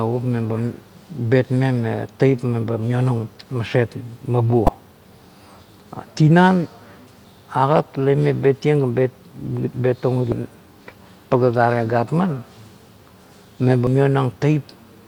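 Damaged data in a compressed stream breaks into the speech at 4.66–4.69 s, then briefly at 7.25, 10.32 and 13.87 s. The decoder misreads corrupted frames and loses sync.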